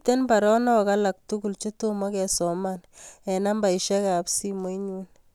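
No technical faults are audible.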